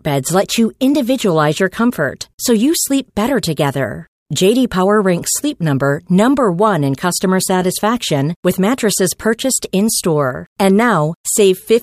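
No technical faults are audible anywhere in the speech recording.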